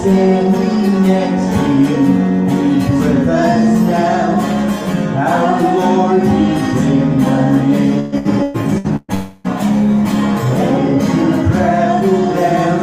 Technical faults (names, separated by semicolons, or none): repeated packet loss (robotic sound); long network dropout